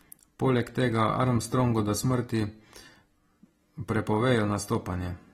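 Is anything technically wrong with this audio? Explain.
Yes. AAC compression damage runs through the whole clip: nothing sounds above 16.5 kHz, and the speech is dull and smeared, with a warbling, fizzy texture on sustained sounds and sibilants. The likely cause is an AAC-LC encoder working at a low bitrate, and the damage fits a rate of around 40 kbps. Starved of bits, it cut the top band off entirely and quantised the remaining spectrum coarsely, leaving gaps that smear and warble.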